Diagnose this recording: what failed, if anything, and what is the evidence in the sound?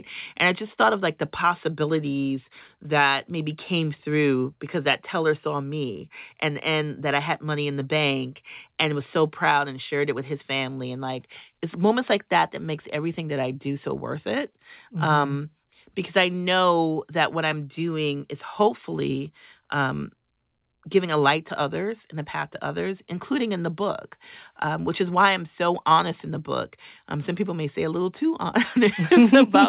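Nothing has gone wrong here: the speech comes through the call path just as it should, with everything above 4 kHz gone, which fits a narrowband G.711 A-law link at 64 kbps, and there's nothing in the sound that points to a failure at any stage.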